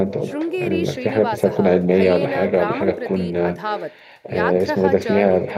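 Echo with no canceller runs throughout the speech. A quieter, thinner copy, about 15 dB down, trails each phrase by roughly a third of a second.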